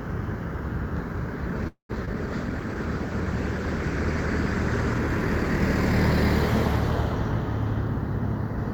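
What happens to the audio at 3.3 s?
At 3.3 s the audio sits inside a call bitrate drop lasting from 2.19 to 5.06 s. Its coarse, watery texture and dulled top end fit the encoder falling from about 48 to 14 kbps. Unlike packet loss, nothing drops out or repeats. The sound keeps flowing, just rougher, until it recovers.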